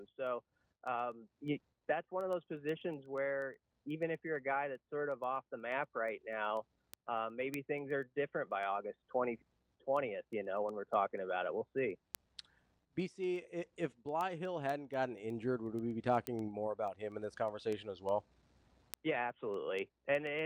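A digital link is being read by a receiver running on its own clock, not locked to the sender's, producing word clock ticks from 0.15 s to 20.39 s. The two clocks drift apart by an amount that fits an error of around 150 parts per million. Each time they slip past one another, a single sample is dropped or repeated, and the misread values surface as sharp clicks of uneven strength. The result is a steady train of ticks, roughly ten per second, running almost the entire length of the audio.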